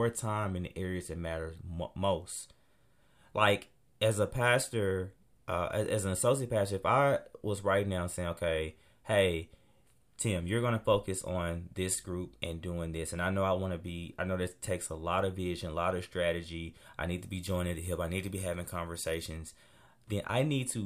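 From 17.18 to 19.37 s, just after "lot of strategy I", pre-emphasis is left on. The treble boost, which fits the CD 50/15 µs curve, was never undone. Highs sit about 8 dB too strong at 10 kHz. The speech turns thin, bright and sibilant.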